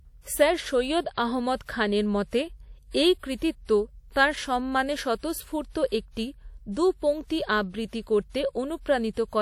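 Throughout the speech, a ringing, washy hiss breathes with the sound, likely from WMA compression near 48 kbps. The spectrogram shows smeared blocks and is empty above 19.8 kHz.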